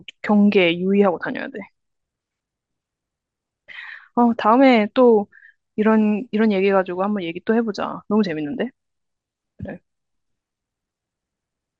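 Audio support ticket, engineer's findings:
Dull, band-limited sound throughout, granular gurgle. Likely MP2 compression at a low rate, consistent with about 80 kbps: top sub-bands switched off, remaining bands coarsely quantised and flickering, so codec damage is plainly audible.

DAB burbling at 8.54 s: brief burst of burbling over the speech. Residual bit errors in the received MP2 stream, at a small error rate of about 0.2 percent, corrupted samples, putting short blips of noise into individual sub-bands across five frames.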